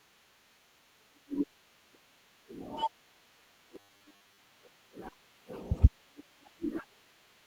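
Robotic sound from repeated short buffers runs from 3.76 to 4.39 s, where the speech hardens into a rigid, metallic buzz at 100 Hz. The likely cause is late-arriving audio, with a 10 ms buffer looped in place of most of the real signal.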